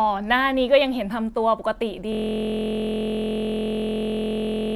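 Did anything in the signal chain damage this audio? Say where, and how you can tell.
Yes, a system hang loop at the driver buffer. From 2.12 s to the end, one frozen 23.22 ms slice replays as a steady 43.1 Hz buzz, which fits a 1024-sample ring buffer.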